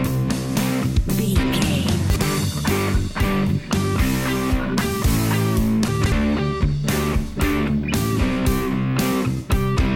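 At 2.1 s there's a brief jumble: chunks out of order, where a 60 ms piece turns up one slot late, until 2.22 s. It recurs at 5.88 to 6.12 s, three chunks late, so a longer scrambled patch.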